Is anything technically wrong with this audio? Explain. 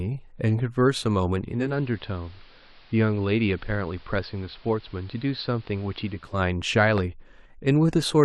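Yes, there are two faults.

Digital radio blending to analogue, 1.44 to 6.45 s: the receiver lost its digital signal and cross-faded over about 385 ms to the station's AM broadcast, then back. The speech drops by about 4 dB and gains hiss roughly 30 dB below it.

Loud pop, 6.98 to 7.00 s: a single sharp pop, about 10 dB above the speech, sits on top while the speech carries on underneath. It is likely a sudden voltage step or pulse, from a switch, plug, static or driver glitch, shaped by the following circuitry.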